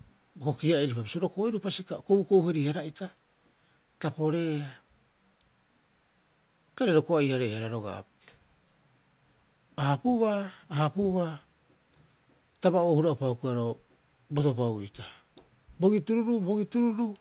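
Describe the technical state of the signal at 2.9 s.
At 2.9 s the speech comes through intact, with no dropout, glitch or distortion, only the narrow telephone-band sound of the call path, which carries nothing above 4 kHz.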